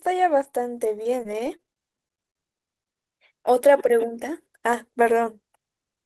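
A speech recording carried over a call codec path, band-limited to around 12 kHz, shows repeated packet loss (robotic sound) from 0.43 s to 2.38 s. Over those two seconds the stream drops out 15 times, with gaps up to 39 ms, and the receiver masks each hole by extending the last decoded sound. About a sixth of the stretch is concealed this way, giving a choppy texture with fragments of speech missing.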